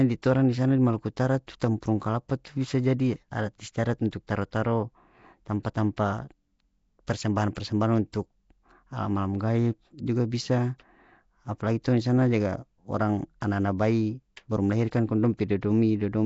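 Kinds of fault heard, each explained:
Nellymoser compression: The whole clip has a rough, hissy halo around the speech and a smeared, underwater feel, with nothing above 7.7 kHz. That's likely Nellymoser Asao, the old Flash microphone codec, which gives weak bands no bits and fills them with noise instead.
Pre-echo: At 7.55 s a brief 17 ms hiss sneaks in just ahead of a sharp attack, which then lands soft and blurred. The codec spreads the noise meant for the loud part across its whole block, so it also fills the quiet moment just before.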